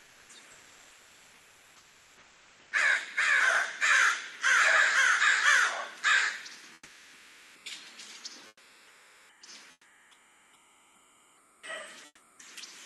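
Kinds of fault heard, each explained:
Comfort noise in place of the background: in six quiet gaps, from the very start to around 12.4 s, the real background turns into a smooth, featureless, steady hiss. It runs about 1 to 4 dB quieter than the real thing, and the last two stretches drop by about 10 dB. The likely cause is Opus DTX, where the sender stops coding quiet stretches and the receiver fills them with synthetic noise until sound returns.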